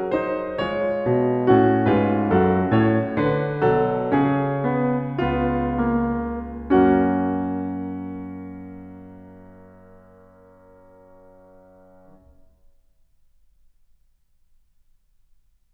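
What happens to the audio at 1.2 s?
At 1.2 s the music plays through intact, with no audible fault at that moment.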